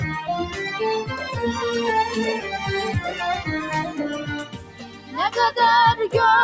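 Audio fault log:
Throughout: noise suppressor applied to music or sounds. A speech-oriented suppressor stays active across the clip and treats sustained, non-speech content as noise. The gain it applies keeps swinging by roughly 10 dB, so the level pumps and thins. The call path's band limit leaves nothing above 8 kHz, which is normal for call processing.
4.44–5.17 s: sound cut by the noise suppressor. Over about 0.7 s the suppressor classifies this passage as noise and attenuates it harder than its surroundings. The deepest drop is about 12 dB, so the sound sinks before recovering.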